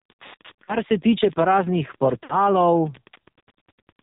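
A speech clip that's been through the AMR narrowband mobile codec, and a pretty starved version of it. Nothing above 4 kHz gets through, and the voice has that buzzy, synthetic edge you get when the codec's vocal-tract model is rebuilding everything from just a few pulses per subframe. The damage is heavy enough that it sounds like one of the lowest AMR-NB modes, which fits something around 5.9 kbps. Running under the whole thing is Wi-Fi interference: a steady tick about ten times a second, spaced 102.4 ms apart, which is a nearby Wi-Fi radio's beacon being rectified somewhere in the audio circuit. It sits well below the speech. Then there are two spots with lost AMR speech frames. The first, from 0.64 to 0.76 s, gives a short smeared warble as the decoder reuses the last good pitch and vocal-tract settings at falling gain, and the voice comes back a touch weak. The lost stretch there sounds like about 40 ms, which fits two 20 ms frames. 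The second, from 2.24 to 2.35 s, is a longer concealment. The sound drags out and sags noticeably before recovering slightly rough. That points to about 60 ms lost, or three frames, most likely radio errors failing the frames' checksum.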